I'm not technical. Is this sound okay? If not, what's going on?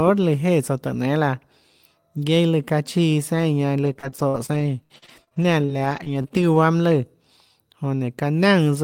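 No. From 3.85 to 6.58 s the speech turns choppy and robotic, with little pieces dropping out. This is repeated packet loss (robotic sound): chunks of audio went missing 16 times, and each hole was patched by stretching the previous sound, about half a second in all.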